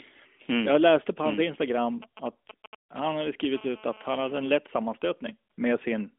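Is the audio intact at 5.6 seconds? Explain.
No. AMR comfort noise fills 5.52 to 5.58 s, ending just before 5.6 s. The phone judged the signal silent and sent no speech frames for 60 ms, so the receiver substituted a smooth synthetic hiss for the real sound, over an otherwise light AMR-NB narrowband line.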